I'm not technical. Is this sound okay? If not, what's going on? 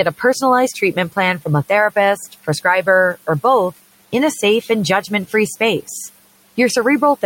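No. Between 2.17 and 2.65 seconds, right after "from a", there is speech cut by the noise suppressor: the tool that filters out background hum mistook part of the speaking for noise and turned it down. For about a tenth of a second in total, sounds there come out faint or swallowed, as if the speaker briefly mumbled. The quiet room noise underneath is simply the room itself.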